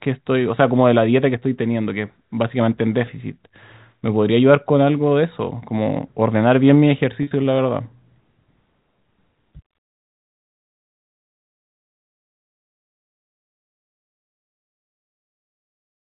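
Packet loss with pitch repetition occurs at 3.06 s, where a 10 ms gap is bridged by repeating the last pitch period, giving a brief buzzy hold. From 7.23 to 7.31 s, 70 ms goes missing in bursts, the longest 40 ms, producing a stuttering, buzzy smear.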